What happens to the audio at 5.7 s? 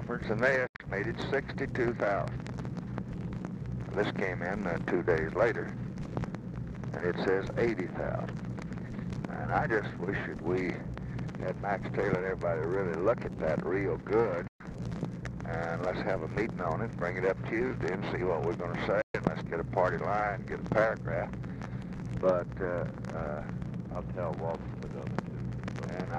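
Nothing goes wrong at 5.7 s; the audio plays through that moment intact, with no audible fault.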